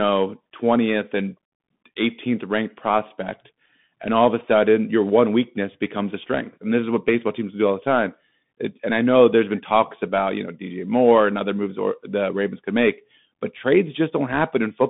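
Speech carrying Bluetooth CVSD headset codec damage throughout. The band runs roughly 150 Hz to 3.6 kHz, so a spectrogram shows a hard ceiling with nothing above 3.8 kHz. One-bit slope coding, which fits a 64 kbps stream, leaves scratchy sibilants and a granular hiss under the speech.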